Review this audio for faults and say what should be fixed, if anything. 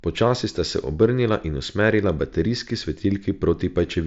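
No faults; nothing needs fixing.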